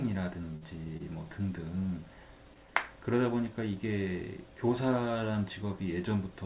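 At 0.56 to 0.63 s, 0.97 to 1.02 s and 2.54 to 2.58 s the speech hangs briefly, each a short stall from a late packet: the jitter buffer ran dry and the receiver stretched the last sound, by 52, 24 and 16 ms, until the data arrived. Unlike a dropout or concealed loss, nothing is skipped; the speech resumes exactly where it paused, just later, through a narrowband path cut off at 4 kHz, consistent with G.711.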